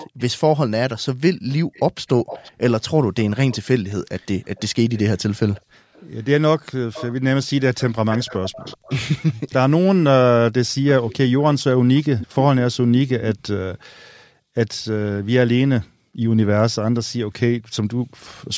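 Echo leak returns a delayed copy of the voice at 0.00–0.33 s, 1.74–2.52 s, 3.18–5.00 s, 5.54–6.05 s, 6.93–7.14 s, 7.78–9.33 s and 10.89–13.84 s. It trails the speech by about 0.38 s and sits roughly 15 to 30 dB below it, likely from a loudspeaker whose echo canceller let the played voice back through. On a spectrogram, the harmonic patterns of the speech repeat more weakly 0.38 s later, all within the call band that ends at 8 kHz. On the waveform, low-level energy fills what would be pauses.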